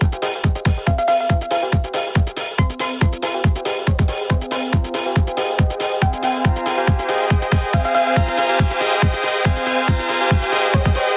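Gain pumping runs through the whole clip. The level sounds squashed, with loud and soft parts sitting close together. The gain swings by about 5 dB. Input gain set far too high, with a fast limiter pulling it back down, is the likely cause. Nothing reaches above 4 kHz, which fits a narrowband call codec such as G.711.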